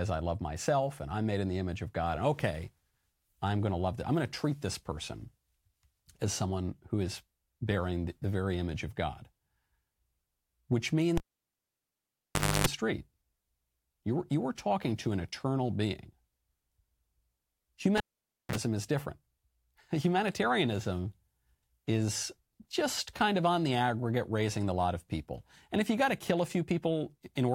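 At 11.17 s and again at 17.97 s the cable is pulled and plugged in while live. Each event opens with a pop and drops to near silence, 1.45 s then 0.53 s. A brief mains buzz (294 ms at 50 Hz, then 37 ms at 60 Hz) precedes a closing pop.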